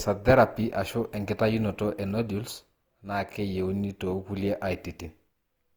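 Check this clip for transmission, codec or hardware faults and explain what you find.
One codec fault runs through the whole speech clip. Throughout, it has generation loss: a swirly, hollow texture with smeared consonant onsets. The likely cause is repeated lossy coding, consistent with Opus at about 48 kbit/s, applied about three times. Each pass requantises on a shifted frame grid, so noise and spectral gaps accumulate.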